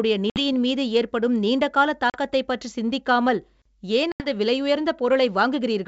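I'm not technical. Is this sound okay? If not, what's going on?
No. It has packet loss on an ADPCM call: brief holes of silence at 0.30, 2.10 and 4.12 s, lasting about 60, 40 and 80 ms. Unlike a plain dropout, each gap ends with slightly distorted speech before settling.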